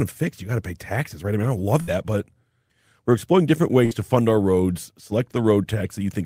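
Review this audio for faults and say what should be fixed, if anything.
Two bursts of packet loss occur: 1.81–1.90 s, after "I mean I don't", and 3.85–3.94 s, after "we're exploring different". Each drops 60 ms. The last sound is held and faded, then playback jumps ahead. Forward error correction or deeper jitter buffering would prevent this.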